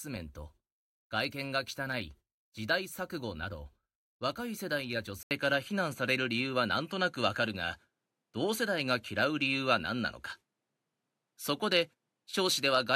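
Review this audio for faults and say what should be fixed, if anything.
At 5.23 s the speech drops out for 80 ms. It returns duller, with nothing above 13 kHz, a level shift of roughly 5 dB and faint new background noise. That is likely an input switched to a poorer device. To prevent it, lock the recording input so the system cannot change devices mid-session.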